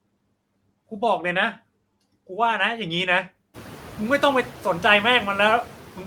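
A noise suppressor runs throughout the clip, cutting the frequency bands it judges to be steady noise by about 16 dB, frame by frame. These noise suppressor artifacts make the background drop away between words and return beneath them, including the room noise that rises by about 22 dB from around three and a half seconds to sit about 18 dB below the speech.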